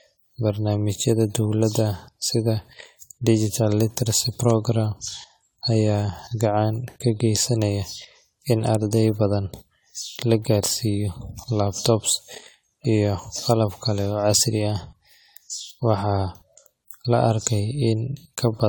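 Right from the start and all the way through, the speech has that swirly, smeared, hollow quality of generation loss. It's more washed-out than a single pass at this quality would give you; the character fits AAC-LC at around 96 kbit/s, likely re-encoded something like ten times over. Each round re-quantises on a shifted frame grid, so noise and spectral holes pile up and consonant attacks blur, even though content still reaches up to about 20 kHz.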